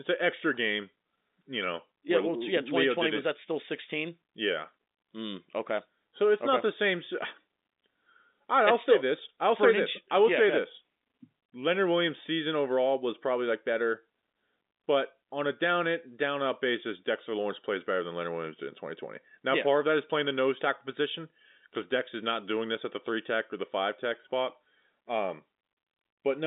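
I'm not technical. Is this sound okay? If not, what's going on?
Yes, the speech comes through ordinary G.711 telephone coding with the usual narrow phone-line sound and no faults to report.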